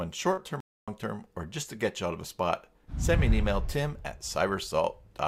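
At 0.33 to 0.39 s there is a short concealed packet loss: about 40 ms of audio failed to arrive in time, and the decoder covered roughly 37 ms of it by extending the preceding sound before crossfading back. The result is a brief smeared, wobbly patch. From 0.60 to 0.88 s the output drops to silence for 0.27 s and then resumes, a playback stall likely caused by the player's buffer running empty or its audio thread being blocked.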